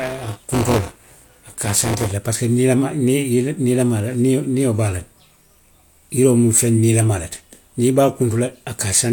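Speech opens with buffer tearing from 0.00 to 2.12 s, ending just before "le parsiko niilamaa": a steady robotic buzz at 200 Hz. Writer and reader are crossing inside each period, so roughly a sixth of every buffer replays audio about 20 ms old. The waveform shows hard joins every 5 ms, and the spectrogram shows vertical striping with 200 Hz harmonic lines while the voice is active.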